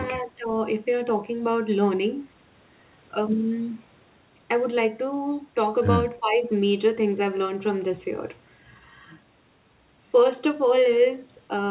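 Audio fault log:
0.17–0.58 s and 6.19–6.50 s: speech suppressed in double talk. The speech drops by about 15 dB for a few hundred milliseconds each time, sounding ducked. The likely cause is an echo canceller turning the talker down while the far end spoke over it.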